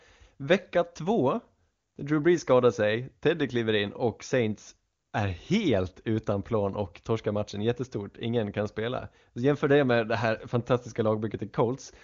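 No technical faults can be heard in this speech, which carries the band-limited sound of AMR wideband (HD Voice) coding at a high rate, with nothing above about 7.2 kHz.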